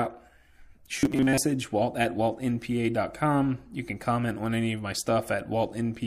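From 0.97 to 1.38 s the speech turns into a rigid metallic buzz at 133 Hz, robotic sound from repeated short buffers, likely caused by a roughly 7.5 ms chunk being replayed for about half the stretch. A spectrogram shows flat harmonics every 133 Hz; the waveform repeats identical short cycles.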